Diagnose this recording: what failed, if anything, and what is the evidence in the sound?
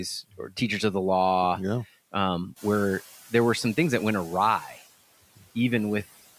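Noise suppressor artifacts from call processing run throughout. Background noise drops about 16 dB between phrases and swells back under the speech. The suppressor cuts each band it judges steady, frame by frame. The room noise rising near two and a half seconds is genuine.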